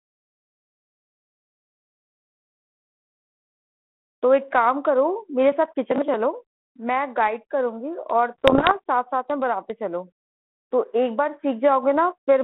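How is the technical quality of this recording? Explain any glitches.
Two short glitches break into the speech, both under a second. It's a phone-band recording, roughly 150 Hz to 3.4 kHz, carrying the light, faint graininess you'd expect from G.726 ADPCM at what sounds like 32 kbit/s.

From 5.52 to 6.14 s there's processor overload crackle. The machine kept missing its deadlines for small audio buffers, which fits chunks of around 10 ms, and something like twenty of them were simply skipped. Each skip leaves a hard-edged gap, so together they come across as a gritty, tearing crackle.

From 8.38 to 8.74 s you get bit errors on an ADPCM link, at a rate that sounds like about one percent, hitting 17 frames. Every flipped bit throws off the decoder's step size and prediction, so the damage rings on briefly. You hear it as pops and rough bursts with quick jumps in level.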